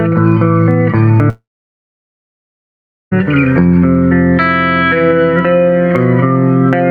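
Gain pumping runs through the whole clip. The level swings by around 10 dB, squashing loud and soft parts closer together. The likely cause is input gain set far too high, with a fast limiter clamping down on peaks.

From 1.29 to 3.13 s there is a long network dropout. About 1.82 s of audio likely never arrived. A brief fading buzz or hiss carries the last sound, then about 1.68 s of silence follows. The audio resumes with that stretch missing.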